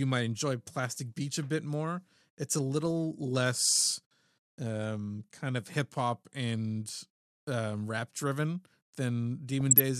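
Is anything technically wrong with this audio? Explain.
Yes. DAB burbling hits the speech at 2.76–2.91 s and 9.61–9.80 s. Weak reception lets bit errors, a fraction of a percent, slip past error correction, so wrong samples put short blips of noise into individual MP2 sub-bands and wrong scale factors make sub-bands jump in level, over the speech rather than the silent gaps a dropout would leave.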